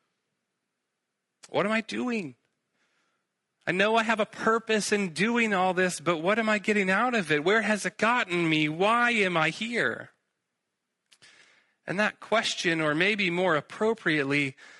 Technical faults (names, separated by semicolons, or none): low-delay AAC compression